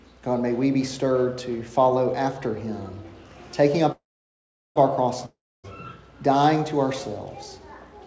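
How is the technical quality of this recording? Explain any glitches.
The recording has two interruptions in the call audio. Content above 8 kHz is absent, which fits a wideband call codec such as G.722.

Call audio freeze, 3.92 to 4.78 s: The last sound continues as a fading buzz and then goes silent for about 0.74 s. The likely cause is delayed packets emptying the jitter buffer. Playback resumes where it stopped, so nothing is lost, but everything after this point runs about 0.84 s late.

Long network dropout, 5.26 to 5.66 s: The audio again trails off into a decaying buzz and then about 0.27 s of silence. It resumes further on, so roughly 0.38 s of sound is missing and never played. This gap likely comes from packets lost in transit rather than merely delayed.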